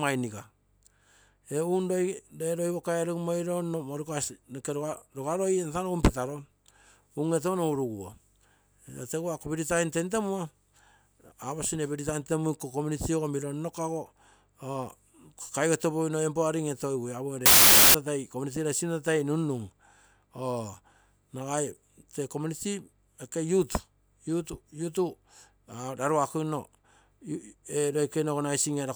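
Wrong sample width from 17.46 to 17.94 s: for about half a second the speech dissolves into loud, harsh noise with the original only faintly audible beneath it, slowed to about 0.67 times speed and pitched down by the same ratio. The 2:3 ratio fits packed 24-bit data read as 16-bit values. Many of the resulting samples mix bytes from neighbouring samples, and only some keep the signal's top bits, so the noise swamps the speech.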